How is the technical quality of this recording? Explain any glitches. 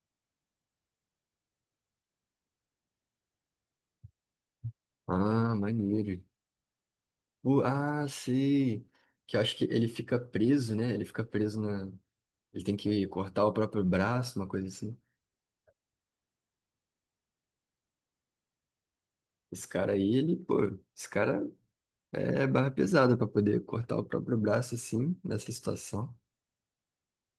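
No glitches or dropouts can be heard anywhere.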